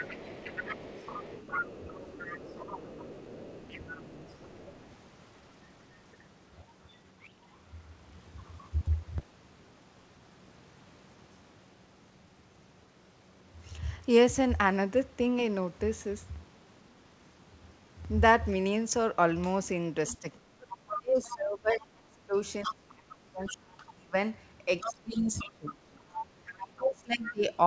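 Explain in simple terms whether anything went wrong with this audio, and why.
Yes, a couple of things went wrong. First, the other side's voice is leaking through: a second, quieter voice sits under the speech from the start to 4.87 s, and again at 20.88–21.35 s, 22.63–23.54 s and 24.81–26.62 s, a bit louder in those later spots. Most likely the talker's loudspeaker was feeding into their mic and the echo canceller missed some of it.

Second, there's speech suppressed in double talk from 20.13 to 24.14 s and from 24.8 to 27.46 s. The talker's voice drops way down, at times nearly out, right while that other voice is coming through. Likely the echo canceller couldn't separate the two and turned everything down.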